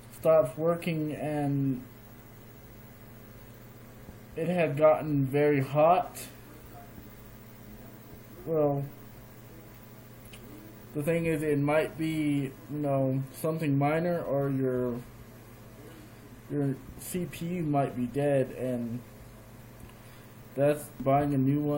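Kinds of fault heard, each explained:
No technical faults can be heard anywhere in the recording.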